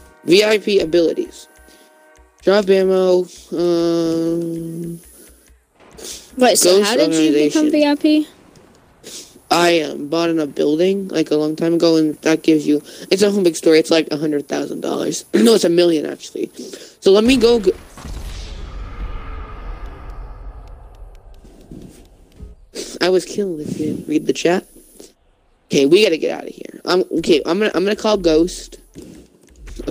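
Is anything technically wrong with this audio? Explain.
No, nothing technically wrong can be heard here.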